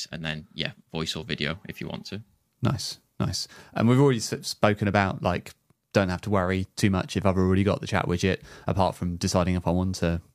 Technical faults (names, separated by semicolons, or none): none